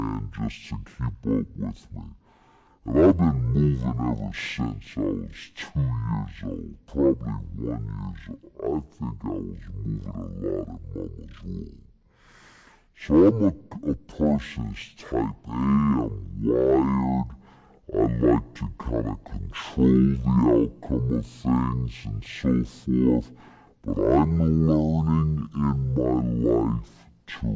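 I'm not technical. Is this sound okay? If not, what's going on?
No. This is a wrong sample rate fault: the audio is played back at half the speed it was recorded at, with no conversion, which fits 32 kHz audio being played at 16 kHz. From start to finish the speech runs at half speed and sits a full octave lower, slow and deep.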